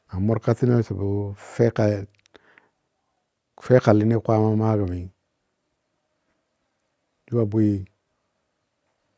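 No technical faults are audible.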